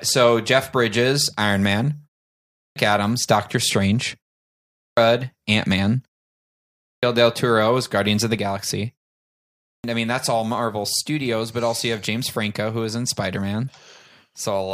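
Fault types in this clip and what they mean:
Clipped start after a pause: After each short pause, the output device seems to drop into sleep and needs time to wake again, so the opening of the next phrase is swallowed. Speech restarts abruptly at 2.38, 4.61, 6.65 and 9.46 s. Each time, roughly 0.36 to 0.38 s is missing after gaps of 0.38 to 0.65 s. On a waveform, flat silence runs straight into full-level speech with no rising onset. A spectrogram shows a hard vertical edge.
Sudden gain jump: At 8.38 s, just after "of the", the whole signal steps down by about 4 dB from one sample to the next and stays there until the end. The likely cause is a digital gain change applied without a ramp. Speech and background noise fall together, so the noise floor drops with the voice. The waveform envelope shows an abrupt step to a lower height, and the spectrogram darkens evenly across all frequencies from that point on.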